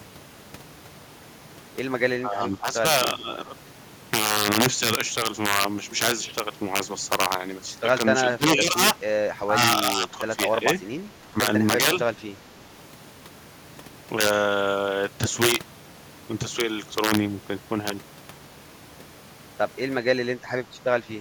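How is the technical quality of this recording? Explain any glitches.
The recording has three faults: harsh overflow cracks throughout, several dips in the speech, and one brief echo.

Integer overflow runs through the whole clip. The signal is driven about 10 dB past the integer limit, and instead of being clamped the peaks wrap to the opposite sign. On a small fraction of samples, under one percent, loud syllables produce violent cracks far sharper than ordinary clipping.

Speech suppressed in double talk occurs at 2.22–2.84, 3.18–3.47, 8.36–8.79, 9.41–9.58, 9.97–10.39, 11.21–11.37 and 20.62–20.68 s. The echo canceller likely mistook simultaneous talk for its own echo and turned the line down. The speech drops by roughly 5 to 10 dB, dipping or thinning in short pieces.

An echo leak appears at 2.41–2.48 s, inside the first dip. The far end's canceller likely failed to remove all of its loudspeaker pickup and sent it back. 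A faint copy of the speech, delayed by 384 ms and roughly 25 dB down, briefly surfaces.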